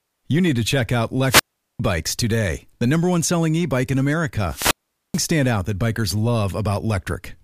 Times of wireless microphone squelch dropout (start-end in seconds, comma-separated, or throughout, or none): 1.27-1.80, 4.47-5.28